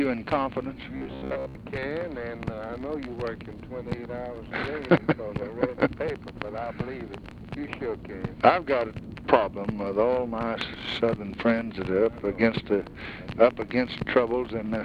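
Robotic sound from repeated short buffers runs from 0.97 to 1.55 s, a rigid metallic buzz near 66.8 Hz. The likely cause is audio arriving too seldom, so a 15 ms buffer is replayed in place of most of the sound, imposing that fixed pitch.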